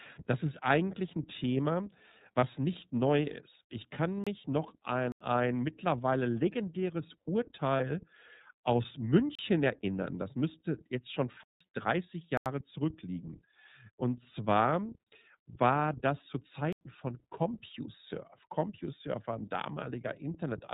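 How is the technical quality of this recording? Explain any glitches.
Technical quality is poor: the speech runs through a low-rate iLBC codec the whole way, with two brief packet-loss patches and six dropouts to digital silence.

iLBC codec: the speech is coded by iLBC at 13.33 kbps in 30 ms frames. Each frame's excitation is coded without leaning on the previous one, and the band stops at 4 kHz. The result is muffled, slightly rough and synthetic, with plainly audible coding damage.

Lost iLBC frames: at 2.40 s and 7.77 s, about 30 ms of audio never arrived, which fits one lost 30 ms frame each time. The decoder filled the gap by repeating the last pitch cycle blended with noise. Each patch sounds like a short, slightly buzzy held vowel, and the speech recovers immediately afterward.

Block of digital silence: at six points the output buffer was likely not filled in time, and zeros played instead. 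The gaps are at 4.24 s (27 ms), 5.12 s (85 ms), 9.35 s (35 ms), 11.44 s (171 ms), 12.37 s (85 ms) and 16.73 s (85 ms). The 85 ms holes fit a 4096-sample buffer, and the 171 ms hole fits two. The sound drops out abruptly. Each gap is heard as a short hole.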